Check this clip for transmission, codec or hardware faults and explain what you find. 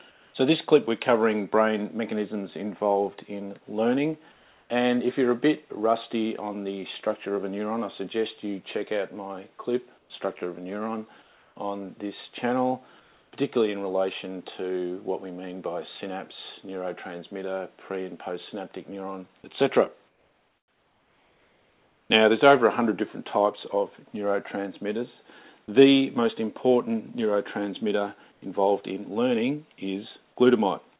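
Two related faults here, both tied to the call's silence handling, heard over a band that stops at 4 kHz, consistent with a narrowband call codec like G.711.

Comfort noise in place of the background shows up at 0.1–0.34 s, 4.32–4.7 s, 9.98–11.56 s, 13.0–13.32 s, 19.42–22.1 s and 28.32–28.42 s. In the quiet gaps the real room tone gets swapped for a smooth, featureless hiss, sitting about 1 to 3 dB lower than the background it replaces. The likely cause is discontinuous transmission: the sender went quiet and the receiver synthesised noise to fill in.

Sound dropped by the voice detector hits at 19.42 s and 25.66 s. Each time roughly 10 ms of actual sound vanishes and a brief 20 ms patch of steady noise takes its place, so you get a tiny clipped edge. Most likely the sender's voice detector misread that sound as background, stopped sending for a frame, and comfort noise covered the hole until it triggered again.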